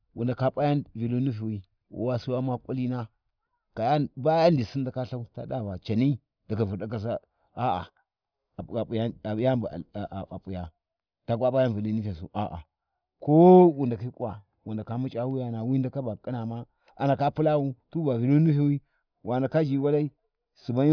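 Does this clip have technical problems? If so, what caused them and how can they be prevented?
No, nothing in this speech recording points to a technical fault, so there is no cause to trace and nothing to prevent.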